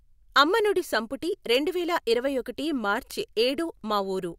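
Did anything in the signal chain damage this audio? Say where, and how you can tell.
Yes. Three bit error spikes occur in this speech, at 0.67, 1.55 and 3.11 s, each a single sharp tick unrelated to the sound around it. They reach about -23, -17 and -10 dBFS. A flipped bit in storage or a digital link briefly throws a sample, or a short run of them, by a power of two.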